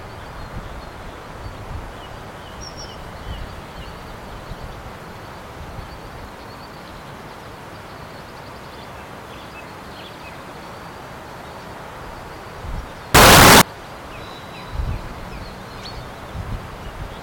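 From 13.15 to 13.61 s the sound turns into a blast of very loud, harsh distortion in which soft sounds are as loud as strong ones. The likely cause is signed and unsigned mixed up on 16-bit samples, flipping the top bit so every zero crossing swings across the whole range.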